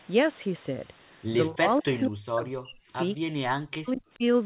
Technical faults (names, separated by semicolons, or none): speech suppressed in double talk